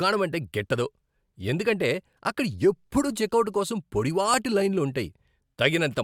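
Speech, with an overlap between stream segments showing up as two brief skips, at 2.35 s and 4.34 s. The events sit almost exactly 2 s apart, which fits segment boundaries every 2 s. At each join the player treated the start of the new segment as duplicating the end of the previous one and trimmed roughly 12 ms of audio that was never actually doubled. The waveform jumps across the gap, producing a small skip.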